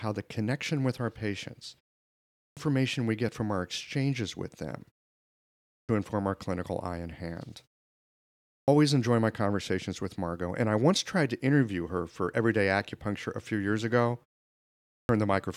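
At 2.18, 5.55, 8.32 and 14.7 s, after pauses of half to three-quarters of a second, a clipped start after a pause swallows 0.34 to 0.39 s as the sleeping output wakes late. Speech then lurches in abruptly before "we get from our", "inform our clinical eye" and "enjoy my conversations with". Muted pauses would lose only background, never the speech itself.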